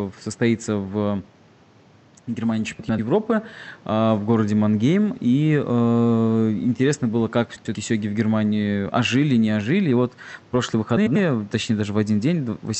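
Three times, pairs of neighbouring frame runs reached the decoder swapped and were decoded in that order, which fits runs of four frames, about 93 ms each. Frames out of order at 2.80–2.99 s, at 7.55–7.75 s between "интересно было как" and "сёги в", and at 10.97–11.16 s after "вот прошлые" each play a 0.19 s stretch with its halves exchanged: a garbled flutter, above room noise about 30 dB down, and no time lost.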